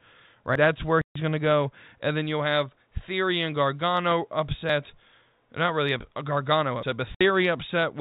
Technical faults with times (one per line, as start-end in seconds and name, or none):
0.55 dropped buffer (overrun)
1.01-1.15 packet loss filled with silence
4.69 dropped buffer (overrun)
6.83 dropped buffer (overrun)
7.15-7.21 packet loss filled with silence